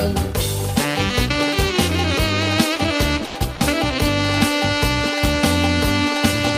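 Two short gaps in this audio sound like stretches dropped by the voice detector: at 3.26 s about 90 ms of the signal disappears, and at 3.55 s another 50 ms goes, each time replaced by steady noise or near silence until the sound snaps back. The likely cause is the sender's detector misjudging a quiet passage as background and pausing transmission, with the receiver filling in comfort noise, which fits Opus running with DTX.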